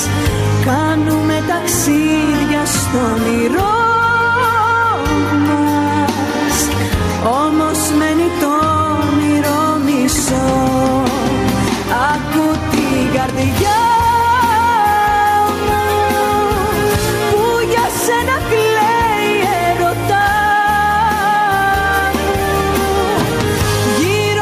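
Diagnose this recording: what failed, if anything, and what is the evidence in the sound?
Gain pumping runs throughout, swinging around 10 dB and squashing loud and soft passages together. The likely cause is input gain set far too high, with a fast limiter in the processing stage clamping each peak.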